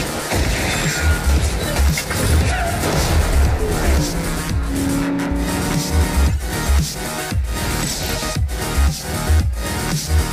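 Nothing in the audio stood out as a technical problem on listening.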